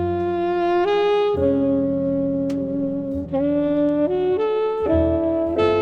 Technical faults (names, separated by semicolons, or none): stream segment skipped